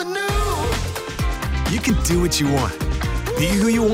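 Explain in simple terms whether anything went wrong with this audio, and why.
Something did go wrong three times. The recording program most likely fell behind and didn't pick up its audio in time, so the hardware wrote new sound over the old before it was saved. This is called a dropped buffer (overrun). Each lost piece is simply cut out and the two sides joined, so instead of silence you hear a jump forward, at 0.72 s (about 30 ms missing), 1.9 s (about 20 ms) and 2.84 s (about 10 ms).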